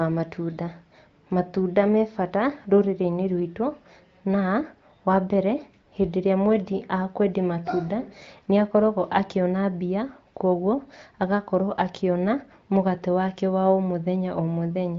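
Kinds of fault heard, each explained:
No faults heard in this clip.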